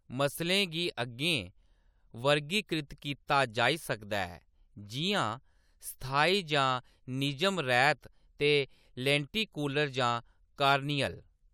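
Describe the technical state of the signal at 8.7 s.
At 8.7 s the speech signal is intact, with no audible dropout, distortion, clipping or other technical fault at that moment.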